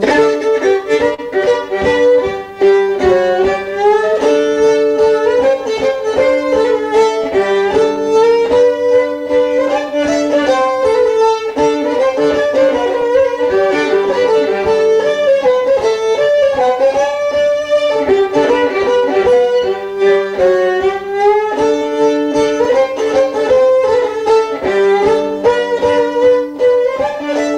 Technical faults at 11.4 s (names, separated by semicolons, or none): clock drift between sender and receiver; repeated timing corrections